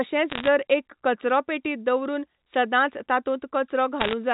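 Bit errors on a digital phone line occur at 0.30 to 0.48 s and again at 4.00 to 4.14 s. The speech travels as G.711 A-law at 64 kbps, so every flipped bit corrupts a single sample. Flips on the sign or upper bits throw that sample far off, producing sharp ticks. At error rates of roughly one to two percent, these ticks cluster into brief bursts of crackle laid over otherwise unaltered speech.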